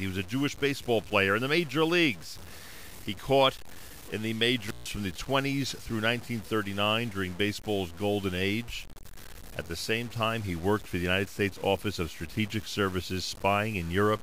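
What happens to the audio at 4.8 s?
The speech drops out abruptly just after "caught in the", with crackle at the edges and faint hiss in the gap, from 4.62 to 4.92 s. This is an intermittent contact: a loose cable or plug opened the line for about 150 ms, breaking the signal.

Underneath, the speech sounds grainy, with distortion that shifts with the voice and quiet parts that turn gritty or sputter. It likely comes from low bit depth without dither: truncation to around 6 bits leaves error about 20 dB below the signal.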